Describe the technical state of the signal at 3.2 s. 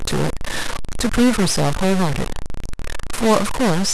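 At 3.2 s the speech carries a stuck bit, a fault present across the whole clip rather than at this moment alone. The likely cause is one data bit held fixed by a broken line or converter, so about half the samples are pushed off by a step of roughly -20 dBFS, in a pattern that follows the waveform. The result is a harsh, buzzy distortion, and because that bit is fairly high, even quiet gaps fill with obvious noise.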